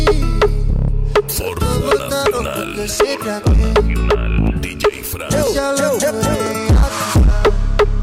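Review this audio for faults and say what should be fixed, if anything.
Periodic USB or driver dropouts: something blocks the USB bus or audio driver every 1.0 s, and about a millisecond of audio is skipped each time, from 0.48 s to 7.47 s. This leaves a regular tick in the sound, heard only while signal is present. To prevent it, find and stop the background task that stalls the bus, or raise the driver's buffer size so brief stalls no longer drop samples.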